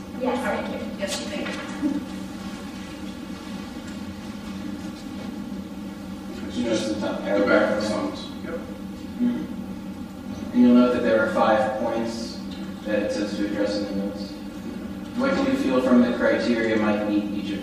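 No technical faults can be heard anywhere in the signal.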